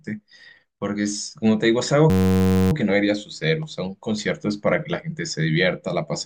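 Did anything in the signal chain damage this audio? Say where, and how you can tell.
Yes. From 2.10 to 2.72 s the speech gives way to a steady buzz at about 94 Hz, a single 10.67 ms slice repeating exactly. This system hang loop happened at the driver or buffer stage, which fits a 512-sample buffer.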